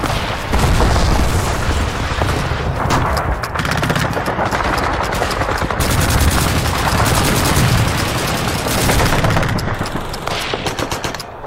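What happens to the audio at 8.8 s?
Nothing goes wrong at 8.8 s; the audio plays through that moment intact, with no dropout, click, glitch or other fault.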